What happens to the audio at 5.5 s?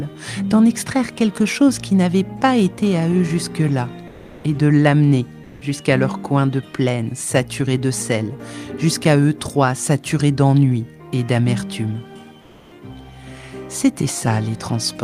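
From 5.43 to 5.59 s, about 160 ms, the background gives way to comfort noise in place of the background, likely from discontinuous transmission in an Opus-style codec. A steady, featureless hiss at the same level replaces the real background, about 27 dB below the loud parts. On a spectrogram, that stretch shows as a smooth, uniform band without texture.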